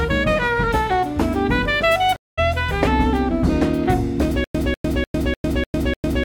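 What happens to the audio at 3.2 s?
Nothing goes wrong at 3.2 s; the audio plays through that point intact, with no dropout, click or other fault.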